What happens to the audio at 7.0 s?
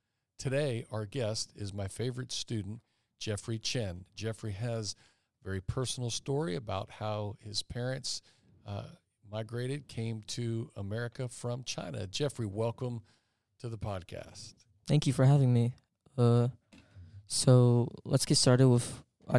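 Nothing goes wrong at 7.0 s; the speech carries on intact through that moment.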